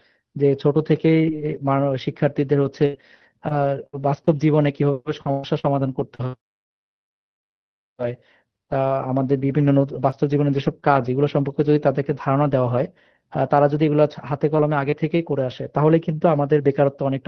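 From 2.85 to 4.69 s, and again from 5.31 to 7.43 s, there is repeated packet loss with a robotic sound. The first stretch has four gaps, the longest 77 ms. The second has seven, the longest 123 ms, with 16% of it patched. Each hole is filled by stretching the previous sound, so the audio turns choppy.

Scattered short gaps follow from 8.72 to 15.00 s. There are about seven brief losses, each around 20 ms or less. Concealment smooths them into small ticks and hiccups.

At 13.58 s a single sharp click stands out. It is likely dropped samples, roughly one sample missing, making the waveform jump abruptly.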